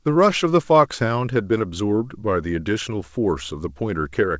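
No technical faults can be heard in this speech clip.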